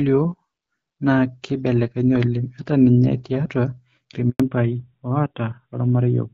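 At 4.30 s there's a handover gap: the call gets passed from one network to another, and for about 100 ms, up to 4.40 s, no speech frames make it through. You hear the voice fall away within a few tens of milliseconds, then a clean hole of silence until the new link picks up. Whatever was said in that window is simply gone, not muffled or smeared.

Right after the gap, from 4.40 s to the end, there's a fallback to narrowband. Up to that point the sound has the openness of HD Voice, with only light codec colouring of the kind you'd expect from AMR-WB at around 12.65 kbit/s. After the switch nothing above 4 kHz survives, so the speech turns duller and rougher. That pattern points to an older narrowband codec, something like AMR-NB at 12.2 kbit/s.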